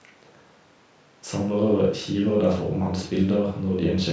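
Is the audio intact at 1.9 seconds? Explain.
Yes, the speech is intact at 1.9 seconds, with no fault at that moment beyond the normal call microphone processing, whose bass cut and absence of content above 8 kHz are expected.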